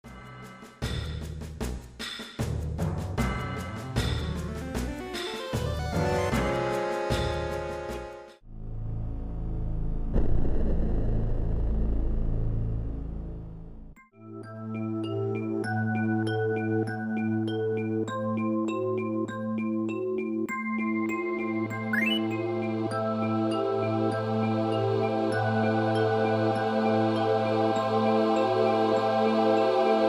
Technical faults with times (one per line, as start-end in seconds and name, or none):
none